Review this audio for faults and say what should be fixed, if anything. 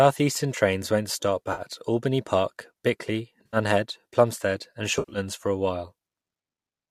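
Three AAC frame loss with concealment events break up this speech, at 1.53 to 1.62 s, 3.46 to 3.57 s and 4.97 to 5.18 s. Roughly 50, 70 and 130 ms of audio are missing, consistent with runs of 10 ms frames from the likely low-delay AAC (AAC-ELD) stream, whose light coding roughness can also be heard. The first two are smeared, noisy patches where the decoder re-used the last good spectrum. The third is spread over about 180 ms with a run of around 100 ms, long enough for the fill-in to dip toward silence before fading back. Add forward error correction or packet redundancy and a larger jitter buffer on the transmission path.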